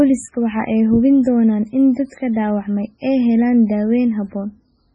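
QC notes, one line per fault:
Throughout, MP3 compression: the speech sounds heavily watery and swirly, with nothing heard above 10.5 kHz. The likely cause is an MP3 encoder starved of bits, consistent with about 16 kbps, cutting the treble and zeroing weak frequency lines that flicker between frames.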